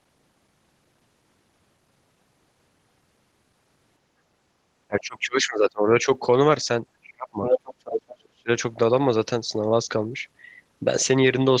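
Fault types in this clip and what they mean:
speech suppressed in double talk: the speech dips sharply, around 25 to 35 dB deep, from 4.88 to 6.07 s, 7.01 to 7.41 s and 8.14 to 8.49 s, likely an echo canceller muting both talkers.
other side's voice leaking through: a second voice, roughly as loud as the main speech, intrudes from 7.44 to 8.15 s, likely loudspeaker echo the canceller failed to remove.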